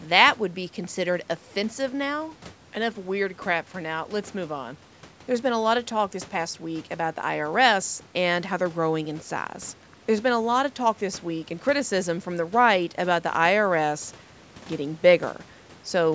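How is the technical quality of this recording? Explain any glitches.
The technical quality is sound, with no glitches to explain, only the ordinary call microphone processing that leaves nothing above 8 kHz.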